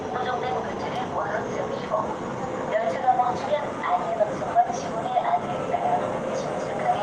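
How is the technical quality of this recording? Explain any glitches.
Nothing here sounds off: there are no glitches to point out, and the sound comes across steady and intact the whole way.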